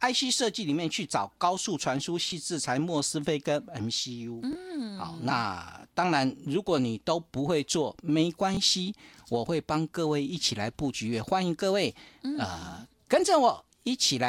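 At 2.30, 4.53, 5.81 and 8.55 s the speech hits a repeated buffer. New audio arrived late, so the device replayed the last piece, about 23 ms long, which fits a 1024-sample buffer. Each piece sounds twice with a hard join, giving a short stutter, and about 20 ms of real audio is skipped. Unlike a dropout there is no silent gap: the gap is filled with a copy of what was just heard.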